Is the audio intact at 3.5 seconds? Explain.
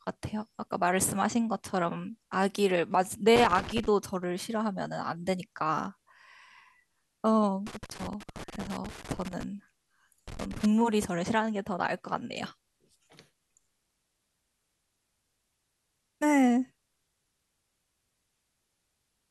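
No. At 3.5 seconds the speech is inside a burst of loose connector crackle running from about 3.36 to 3.86 s, roughly half a second. A worn or dirty contact in the signal path is briefly making and breaking as it shifts, so the audio is chopped on and off in rapid, irregular steps, and any DC offset on the line turns each break into a pop. The result is an uneven scratching crackle over the speech.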